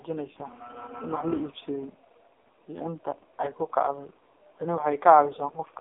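From start to finish the speech passes through the AMR narrowband mobile codec. Nothing above about 3.6 kHz survives, and the lows thin out below 250 Hz. The voice sounds heavily buzzy and synthetic, which fits AMR-NB at its lowest bitrate, around 4.75 kbps.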